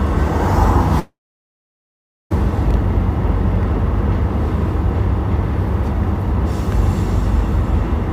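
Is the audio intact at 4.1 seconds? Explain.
Yes, at 4.1 seconds the audio plays through cleanly, with no dropout, click, distortion or other fault to be heard at that moment.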